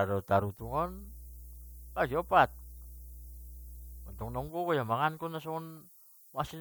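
From start to finish the speech carries low bit depth with noise shaping. The sound points to a signal stored with very few bits, which fits a 9-bit word length. Each sample is rounded coarsely. That rounding error is fed back and pushed toward high frequencies. The result is a steady, thin hiss that climbs sharply toward the top of the band. It sits only about 20 dB below the speech, so it stays clearly audible throughout.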